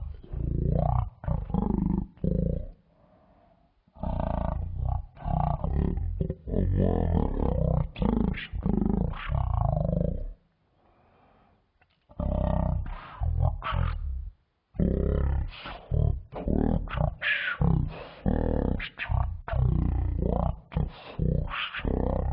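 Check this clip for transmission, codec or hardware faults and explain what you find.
There is one fault, present throughout: a wrong sample rate. The speech runs at 0.36 times normal speed and sits 17.6 semitones low. The samples play out far slower than they were captured, with no conversion. That fits 44.1 kHz audio played at 16 kHz. Everything sounds deep, slow and dragging.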